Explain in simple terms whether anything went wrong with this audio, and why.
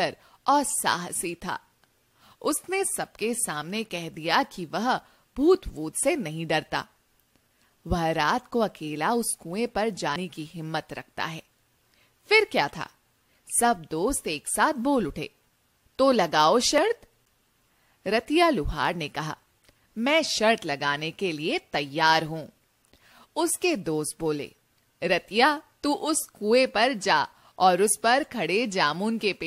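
A dropped buffer (overrun) at 16.78 s: a sudden jump, likely because the recording software missed about 20 ms of sound before it was overwritten.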